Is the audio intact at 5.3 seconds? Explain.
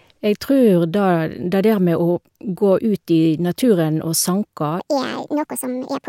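No. From 4.80 to 6.09 s the speech runs hurried and roughly ten semitones high, a section at the wrong speed, likely played back 1.64 times too fast.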